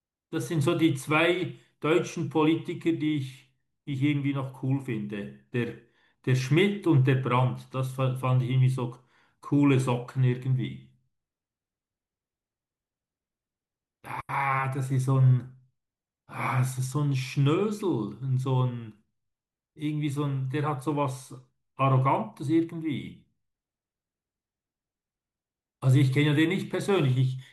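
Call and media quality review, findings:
No faults found in this speech recording.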